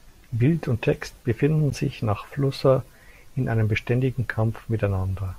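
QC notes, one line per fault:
1.70 s, gap at a join of encoded pieces: a brief silence of about 13 ms cuts into the speech, where separately encoded segments meet with untrimmed encoder delay and padding.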